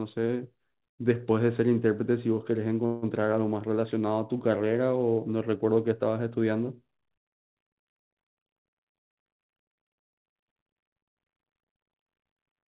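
Speech over a call line, band-limited to nothing above 4 kHz in the way a 64 kbps G.711 mu-law path sounds, and at 2.86 s there's a call audio freeze lasting to about 3.04 s. For those 160-odd ms the last sound just hangs on as a fading buzz or hiss instead of dropping out. Then the speech picks up exactly where it stopped, so nothing's lost but everything after runs about 160 ms late. That's most likely the jitter buffer running dry while packets were held up.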